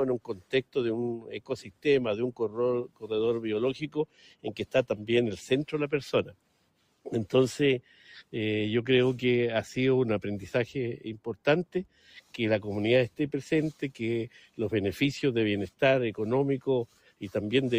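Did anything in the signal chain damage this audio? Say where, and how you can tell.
Yes. The damage is in call processing. A speech-tuned noise suppressor was applied to music or sounds throughout, with gain swinging by around 5 dB. Held sound and tails sink while attacks pass, so the audio pumps. The waveform envelope breathes, and the spectrogram shows sustained bands fading between onsets.

The suppressor cut sound as if it were noise at 0.18–0.76, 1.18–1.86, 2.32–2.57, 2.84–3.08, 3.85–4.49, 6.24–7.06, 11.66–12.34 and 16.87–17.22 s. Level drops by about 12 dB, or about 10 dB at 2.32 s. These show as abrupt waveform dips and darkened spectrogram patches where decays are chopped short.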